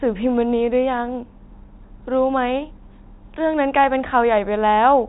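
No faults are audible anywhere in this speech recording.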